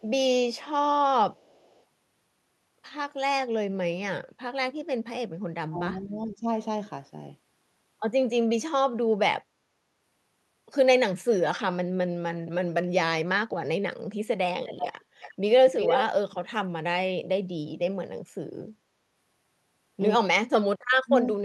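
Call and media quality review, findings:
Echo leak at 1.34–1.83 s, 14.66–15.34 s and 15.77–16.06 s: a delayed copy of the talker comes back, faint at first, then about 10 dB down, then roughly as loud as the speech. Delay of 390 ms, then 355 ms. Likely the far-end speakerphone's echo canceller letting its loudspeaker pickup through.

Speech suppressed in double talk at 5.68–6.48 s (roughly half a second dipping by about 15 dB) and briefly at 21.04–21.11 s (a deep dropout, about 30 dB). Likely the echo canceller mistaking the talker for echo while both sides speak.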